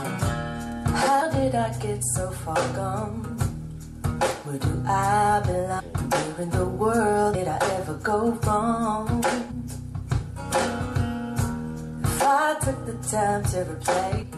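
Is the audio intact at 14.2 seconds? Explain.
No. There is damaged data in a compressed stream from about 14.21 to 14.24 s, roughly 23 ms. Some bytes in the compressed stream were wrong at this point. The decoder could not read those frames properly and lost sync. It then had to search forward for the next valid frame header before it could resume. The result is a very short chirp or blip that cuts across the sound.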